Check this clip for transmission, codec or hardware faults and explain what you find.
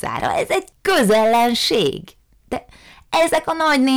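Hard clipping runs through the whole speech clip. The signal is driven about 11 dB past what the stage can pass, so around one sample in twenty is sliced flat. Those squared-off peaks add high harmonics heard as harsh fuzz on louder syllables, seen as flat-topped waveform plateaus and vertical spectrogram smears.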